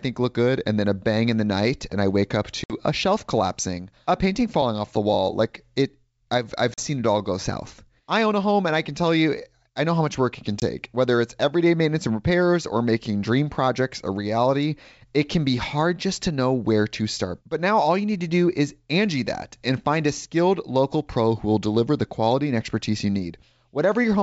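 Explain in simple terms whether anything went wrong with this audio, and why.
Something did go wrong: packet loss on an ADPCM call, three times. At 2.64 s, after "and I wake up", about 60 ms of speech drops to sudden silence. At 6.74 s, after "it I've I've", a 40 ms gap follows, and at 10.60 s, after "much work it can", a 20 ms gap. Each hole is one to three lost packets. Afterwards the receiving decoder's running prediction no longer matches the sender's, so the speech comes back slightly distorted, then settles.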